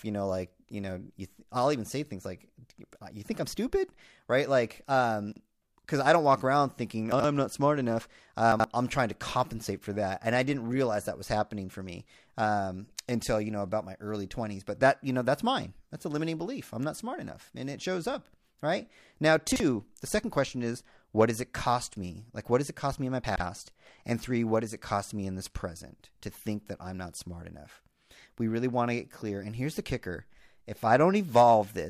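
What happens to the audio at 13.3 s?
At 13.3 s the speech carries on intact, with no dropout, click, distortion or other fault at that moment.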